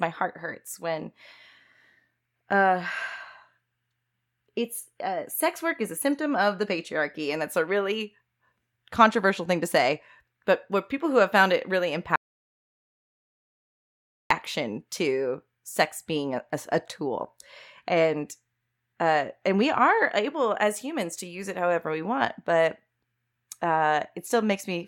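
Right after "have found it really", at 12.16 s, the speech drops out to dead silence until 14.31 s, about 2.15 s with no room tone at all. That's an audio dropout to silence, likely a lost input or stray mute while recording carried on, so that stretch is gone.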